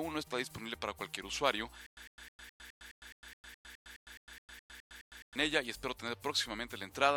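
From 1.86 to 5.36 s, a stutter with silent gaps: a 104 ms burst repeats every 210 ms, likely a stalled player, appearing as evenly spaced blocks between flat lines.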